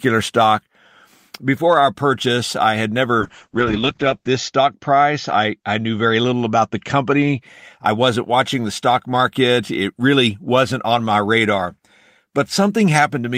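A call bitrate drop runs from 3.21 s to 7.47 s. The connection's bandwidth estimate fell, so the encoder had to squeeze the speech into far fewer bits. The coarseness fits a fall from 32 kbps to about 8 kbps, with the worst stretch lasting 1.07 s. Coding turns rough and watery, and the audio bandwidth narrows from 20 kHz to 8 kHz, dulling sibilants and airiness until the bitrate climbs back.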